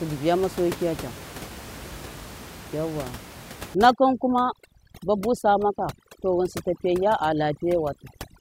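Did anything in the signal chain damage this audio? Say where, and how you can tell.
Yes. From 3.75 s to the end of the speech clip, overdone noise removal at the call-processing stage damages the audio. Up to 3.75 s, room noise sits about 16 dB below the speech. After that point the noise drops to near silence with sparkling specks, and quiet parts of the speech are pulled down along with the noise. A low-bitrate codec also warbles, but it leaves the background bed intact rather than hollowing it out.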